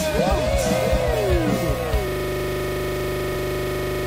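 Throughout the clip a second copy of the audio runs behind the first, a doubled audio track that is likely from the sound being captured again through a slower path or from an edit holding two copies out of step. The copy trails by roughly 0.7 s at about 5 dB below the original. It carries the full band with no decay or room colour, so every event is heard cleanly twice, the echo arriving as a dry repeat rather than as reverberation.

At 0.28 to 0.32 s compressed frames are skipped: whole frames of the encoded stream were either missing or rejected by the decoder as damaged, and playback resumed past them. Roughly two frames are gone, which fits frames of about 43 ms, so the audio jumps ahead by around a tenth of a second. The lost stretch is simply absent, and the sound lurches forward at a join.

From 2.08 s to the end the system hangs in a loop. The computer or its driver stopped supplying new audio while the sound hardware kept cycling one ring buffer, so a single 40 ms piece repeats exactly, 54 times. 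At 25 repeats per second the frozen fragment becomes a rapid, mechanical stutter at a fixed 25 Hz rate that holds unchanged until the clip ends.

At 3.31 to 3.33 s, inside that loop, frames are skipped a second time. Roughly four frames are dropped and about 0.15 s of audio is jumped over, marking another break in the stream on top of the repeating buffer.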